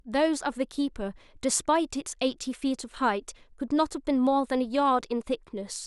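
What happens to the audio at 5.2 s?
Nothing goes wrong at 5.2 s; the audio plays through that moment intact, with no dropout, click, distortion or other fault.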